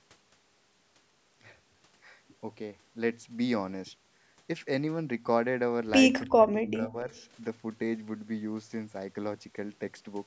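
Speech, with a call's microphone processing leaving nothing above 8 kHz. From 6.25 to 7.11 s the voice dips by as much as about 25 dB and breaks up for most of that span, likely speech suppressed in double talk, with the echo canceller turning down the near talker while the far side spoke. Unlike a network dropout, the sound thins and ducks in uneven pieces rather than going abruptly silent. At 7.16 to 7.22 s a brief, very faint delayed copy of the voice surfaces, trailing it by about 0.29 s. This is likely an echo leak from a loudspeaker the echo canceller did not fully cancel. Unlike room reverberation, it is a distinct, separate repeat rather than a smooth decaying tail.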